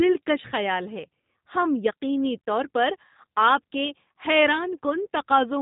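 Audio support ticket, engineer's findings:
G.729 codec in the speech path, throughout. Coding at what sounds like 8 kbit/s rebuilds speech from a vocal tract filter and sparse pulses, giving plainly audible roughness and a synthetic edge. Nothing above 3.8 kHz passes, so the sound is dull and narrowband.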